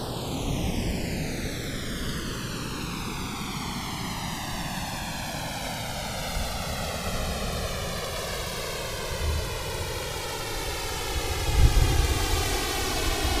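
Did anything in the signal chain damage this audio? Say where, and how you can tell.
Yes: channels drifting apart at the converter stage, across the whole clip. Two devices on separate clocks, roughly 200 ppm apart, let the inter-channel delay slide to around 3 ms, so mono comb notches sweep slowly in one direction, unlike a flanger's repeating back-and-forth sweep.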